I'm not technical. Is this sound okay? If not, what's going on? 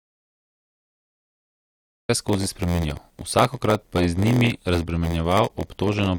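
No. The clip opens in an audio dropout to silence already under way, lasting until about 2.09 s. It is totally dead, with no faint background hiss as a natural pause would have. The likely cause is a lost input, such as a disconnected device, while recording carried on. Anything said then is gone.

From 2.28 s to the end comes a block size mismatch (padded). The speech carries a steady buzz near 86 Hz and runs at about 0.94 times normal speed, yet its voice quality stays the same, unlike a slowed recording, which would sound deeper. Each chunk of audio is followed by a tiny gap, which fits a 512-sample read block only partly filled.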